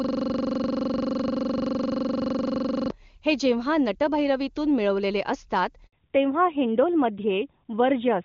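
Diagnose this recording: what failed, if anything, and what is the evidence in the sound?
From the start to 2.9 s, the sound is a steady, rough buzz at about 23.4 Hz. One 42.67 ms fragment repeats exactly, some 67 times, until normal speech returns at "हे जेव्हा". This is a system hang loop at the driver or buffer stage: the host stalled while the hardware kept replaying its ring buffer. The loop length fits a 2048-sample buffer.

At 5.87 s, just after "मिळवलेले असतात", the speech dies away into 60 ms of silence before resuming. This is a handover gap at the network stage. While the call moved between networks, no speech frames arrived, and whatever was said in that interval is lost.

From 5.93 s to the end, the speech sounds duller and boxier, with nothing above 4 kHz. Before this, the wideband codec carried clear upper bands. This is a fallback to narrowband at the codec stage. The band limit points to a switch from AMR-WB at about 23.85 kbit/s to AMR-NB at 12.2 kbit/s.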